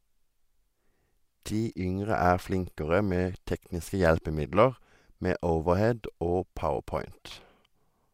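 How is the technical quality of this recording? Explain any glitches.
No glitches or technical faults can be heard anywhere.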